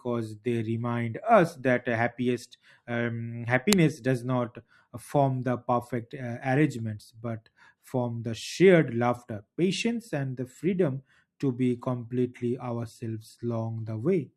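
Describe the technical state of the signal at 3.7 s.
A very brief, loud crack hits at 3.73 s, an uninitialised buffer played before audio was written, which fits a 64-sample block.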